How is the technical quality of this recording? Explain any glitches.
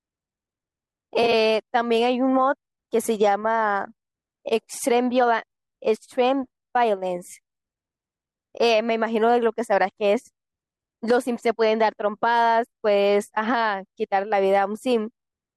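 One glitch stands out in the speech, early on. AAC frame loss with concealment, 1.23 to 1.33 s: around 40 ms of audio went missing in brief runs of about 20 ms or less, spread over roughly 100 ms, and the decoder papered over each gap by reusing the last good spectrum with scrambled phase. The result is a fleeting smeared, noisy patch rather than a dropout, carried over what is likely a low-delay AAC stream with only light coding roughness.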